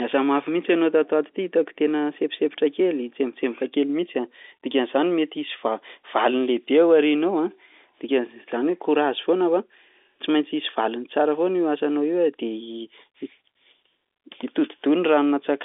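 Speech carried through G.711 mu-law telephone coding, confined to the line band of roughly 300 Hz to 3.6 kHz with nothing above about 3.8 kHz, shows no technical faults.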